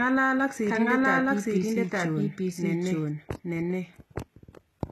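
Throughout the clip, the same audio is likely being captured a second time by a slower path, so it plays as a doubled audio track. A full-band copy trails about one second behind at roughly equal loudness, with no decay or room colour.

The signal has also likely passed through HE-AAC compression, which codes only the lower spectrum and rebuilds the treble from copied bands. Damage is plainly audible, pointing to a low bitrate near 16 kbps. S sounds turn gritty or metallic, and nothing remains above 12.3 kHz.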